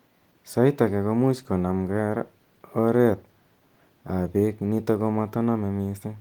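The speech has no technical faults, and its Opus voice compression runs in hybrid mode at 20 kbps with the full band kept up to about 20 kHz.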